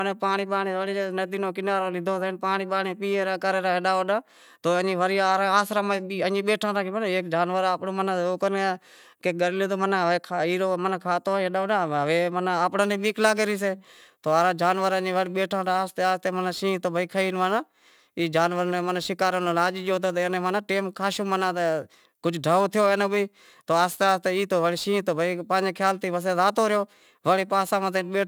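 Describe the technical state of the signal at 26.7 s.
Crude rate conversion is present at 26.7 s, within a span from 12.82 s to the end. Samples are dropped or repeated without filtering, consistent with a 48 kHz to 44.1 kHz change, leaving an error roughly 30 dB under the speech, heard as gritty, inharmonic fizz.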